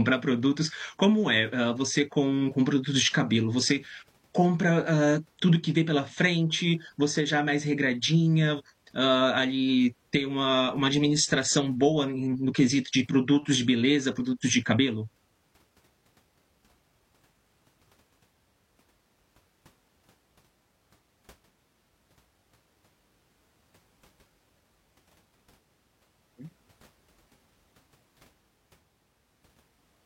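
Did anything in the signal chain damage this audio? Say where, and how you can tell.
Yes. Damaged data in the compressed stream, at the codec or storage stage: corrupted frames made the decoder misread and lose sync. The result is a brief glitch from 8.55 to 8.61 s, between "já é mais regradinha" and "hã ali ter uma".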